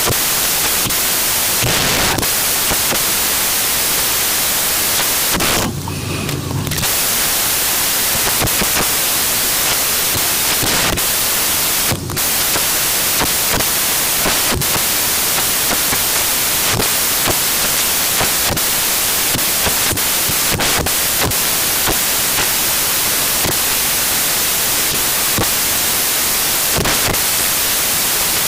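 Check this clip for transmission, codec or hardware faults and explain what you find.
One fault runs through the whole clip: samples built from the wrong bytes. Misassembled byte order or alignment turns each sample's low bits into its loudest part, so the speech becomes loud, harsh broadband noise, close to white on the louder passages.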